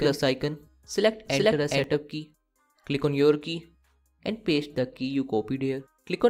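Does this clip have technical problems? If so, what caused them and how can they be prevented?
Yes. The audio was likely picked up a second time through a slower route, or an edit left two copies of it out of step. This causes a doubled audio track from the start of the clip until 1.84 s: a second full-band copy trails the original by around 400 ms at roughly equal loudness, with no decay or room colour, so everything sounds twice before the copy drops out abruptly at 1.84 s. To prevent it, monitor or capture through only one path, and check edits for overlapping duplicate regions.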